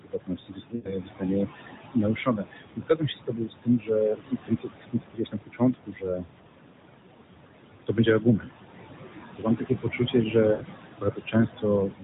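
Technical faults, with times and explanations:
Throughout, noise suppressor artifacts: the suppressor pulls the room noise, which sits only about 9 dB under the speech, down by about 20 dB wherever it judges a band to be steady noise. The background dips between phrases and swells back under them.
0.01–1.72 s, 1.93–3.91 s, 4.14–6.27 s, 7.87–8.5 s, 9.35–10.35 s, 11.01–11.66 s and 11.87–12.03 s, speech cut by the noise suppressor: in each stretch the suppressor mistakes quieter bits of speech for noise and drops them by about 16 to 22 dB. Soft consonants and word tails sound swallowed, adding up to roughly 1 to 1.5 seconds in the longer stretches.
0.76–0.94 s and 10.52–10.63 s, lost AMR speech frames: about 80 ms of audio goes missing each time, which fits a run of four 20 ms frames failing. The decoder stretches the last good sound with falling gain, so it smears and fades out, then comes back a bit weak and rough.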